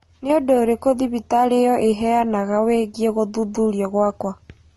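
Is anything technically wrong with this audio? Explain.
Yes. Throughout the speech, the top end stops at about 11.7 kHz, and two kinds of coding grit sit together: the artefacts of both codecs heard at once. This is likely transcoding between lossy codecs, a low-rate AAC pass followed by MP3, with the second encoder spending bits on the first one's artefacts while adding its own.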